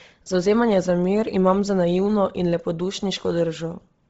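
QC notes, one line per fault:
Throughout: Bluetooth LC3 compression. The speech has a breathy, grainy edge, and nothing reaches above 7.8 kHz. The damage is heavy and points to a low-bitrate transform codec, likely LC3 at a rate that fits 24 kbps. The encoder drops much of the upper band and fills the gaps with shaped noise. That fill is what tells it apart from a clean low-pass, which would sound dull but smooth. The short, even granularity fits 7.5 ms frames rather than the slower smearing of MP3.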